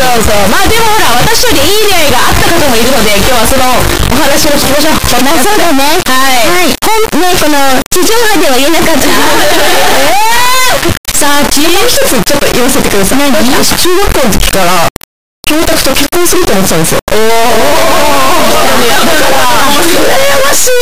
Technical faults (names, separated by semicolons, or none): integer read as float